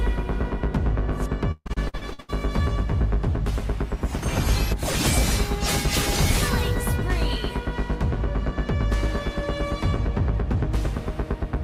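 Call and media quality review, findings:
Choppy, robotic stretch from 1.51 to 2.30 s, with pieces of sound missing. Repeated packet loss: nine gaps, longest 140 ms. Receive-side concealment bridges each gap by extending the last sound, covering over half the span.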